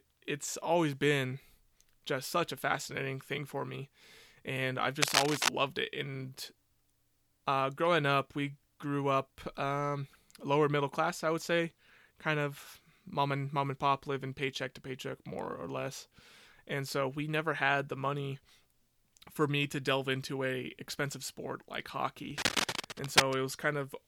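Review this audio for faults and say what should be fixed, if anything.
Cable scratch noise occurs twice: from 5.02 to 5.49 s, just after "for me and I've", a few dB louder than the speech, and from 22.31 to 23.35 s, after "a expensive sport like", at roughly speech level. Each burst is a dense, uneven rustle, likely from a worn cable or connector being moved. Digital crackle would sound like sparse, sharp clicks. Replace the worn lead and fasten the cable so it cannot shift while recording.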